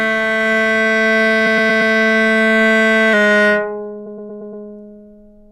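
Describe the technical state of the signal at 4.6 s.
At 4.6 s the audio is a semitone flat and slowed by 5.6%, likely a drift correction step, from 3.13 to 5.51 s. Pitch and speed drop together, unlike a pure pitch shift. Repeated frames also run from 4.06 to 4.64 s. The same 116.1 ms block of sound replays as a stutter, adding about 0.58 s. Identical material returns, which sets it apart from dropouts or gaps.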